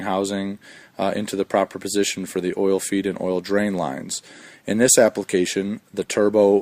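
Nothing in the audio stood out as a technical problem on listening.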